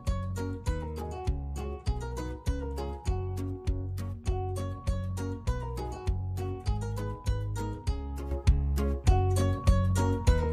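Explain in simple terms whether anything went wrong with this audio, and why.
At 8.31 s there is a sudden gain jump: everything, background included, abruptly gets louder and stays that way, likely from a volume change applied instantly without fading.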